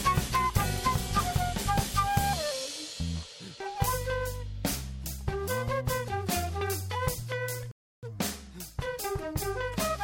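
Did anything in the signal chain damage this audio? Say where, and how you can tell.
Yes, at the playback stage. The music drops to silence at 7.71 s and picks back up at 8.03 s, continuing from exactly the point where it stopped, so nothing's missing, it's just been pushed later by about 315 ms. That's a classic rebuffering stall: the player drained its downloaded audio, had nothing left to play, and simply waited until more data arrived before carrying on.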